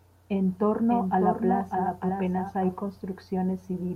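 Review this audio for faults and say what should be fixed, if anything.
From 0.90 to 2.74 s the speech is heard twice: a second full-band copy trails by about 0.7 s at roughly 5 dB lower, dry and with no room colour, and it cuts in and out abruptly. This doubled audio track likely comes from the same source being captured again through a slower path. To prevent it, route each source through only one capture path, or mute the duplicate before mixing.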